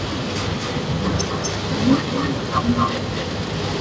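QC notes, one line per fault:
Throughout, echo with no canceller. Each phrase returns roughly a fifth of a second later, about 7 dB quieter and thinner. The far end's loudspeaker feeds its microphone and nothing cancels it. The band stops at 8 kHz, which fits a wideband call codec.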